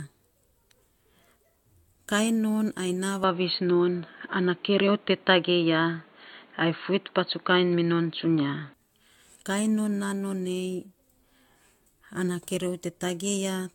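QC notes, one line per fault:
throughout, generation loss: the audio was likely decoded and re-encoded about five times through AAC, fitting a 96 kbit/s chain; requantisation leaves swirly, smeared, hollow speech, blurred attacks, and nothing above 17 kHz.
3.24–8.74 s, input switched to a poorer device: capture likely moved to a narrower-band input with no gap, so speech turns dull and boxy, cut above 4.4 kHz, level shifting by about 5 dB, with new noise about 35 dB down.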